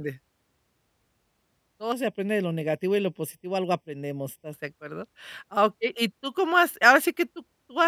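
From 1.92 to 4.53 s, channel delay (comb filtering): one channel lags roughly 0.4 ms, so the mono sum turns the speech hollow. Spectrograms show dark, evenly spaced notch bands from around 1.5 kHz.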